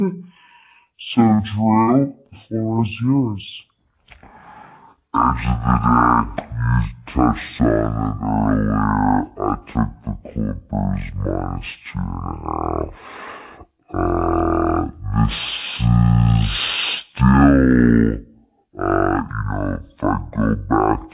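Wrong sample rate, throughout the clip: the speech runs at half speed and sits a full octave low, 12 semitones down, which fits audio recorded at 16 kHz being played back at 8 kHz without conversion, so pitch and tempo drop together into a slow, deep drawl.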